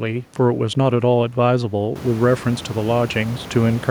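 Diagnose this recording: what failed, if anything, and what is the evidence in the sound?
Nothing in the signal chain has failed: the speech carries no defects attributable to any stage, and the only notable change is the room's own background noise rising by about 15 dB at around the two-second mark while staying about 20 dB below the speech, which is part of the acoustic environment rather than the system.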